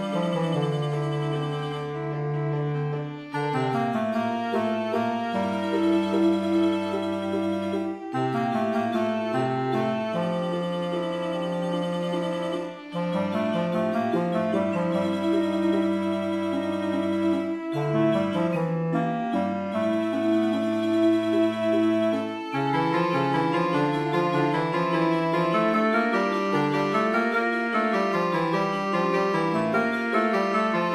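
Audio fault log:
No faults detected in this clip.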